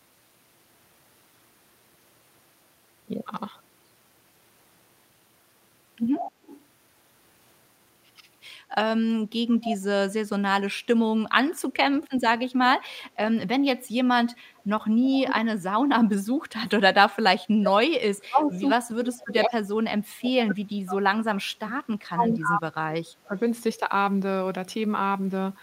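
From 6.17 to 6.64 s there is an echo leak: a faint delayed copy of the speech, 122 ms behind and roughly 10 dB down, most likely because the far end's echo canceller passed part of its loudspeaker pickup back. A brief speech suppressed in double talk follows at 8.91 to 9.0 s, a dip of around 20 dB, likely from the canceller turning down its own talker along with the loudspeaker echo.

The echo leak returns from 9.49 to 9.78 s at the same 122 ms lag and a similar low level, likely the same residual loudspeaker path. From 10.26 to 10.55 s the speech is pulled down by roughly 35 dB, a deeper double-talk cut that likely comes from the suppressor again treating the talker as echo.

Between 15.03 and 15.21 s a milder dip of about 10 dB overlaps an echo leak at 15.13 to 15.36 s. That repeat sits only about 5 dB under the speech, so it is the most audible of the echoes, likely the canceller being least effective while both sides talked.

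The longest fault is speech suppressed in double talk from 15.78 to 23.33 s. For about 7 s the speech is attenuated by as much as 40 dB, likely the suppressor clamping down during sustained overlapping talk. Inside that stretch, at 20.49 to 20.54 s, a short scrap of echo leaks through at the same 122 ms delay, likely residual loudspeaker pickup.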